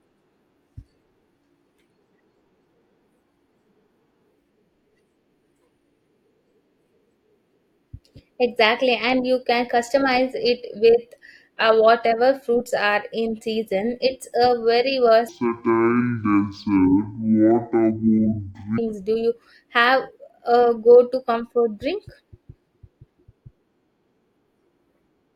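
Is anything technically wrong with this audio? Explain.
Yes. Stereo read as mono, from 15.29 to 18.78 s: for this stretch the two-channel data is taken as one stream, so the left and right samples are played back in sequence as though they were consecutive moments of a single channel. Each stereo frame then lasts twice as long, so the speech runs at 0.5x speed and drops 12 semitones, a full octave. A faint mirrored copy of the sound also shows up in the upper half of the spectrum.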